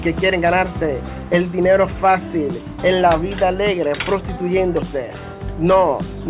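Nothing in this audio stands out as a technical problem, so there's no fault to point to and no time or cause to give.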